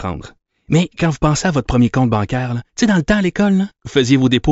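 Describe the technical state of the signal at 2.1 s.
At 2.1 s the speech signal is intact, with no audible fault at that moment.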